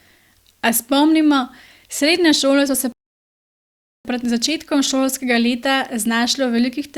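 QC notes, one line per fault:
2.92–4.05 s rebuffering stall: after "srednje šole so se" playback runs dry, inserting 1.13 s of silence (flat waveform, blank spectrogram band), then resumes exactly where it stopped.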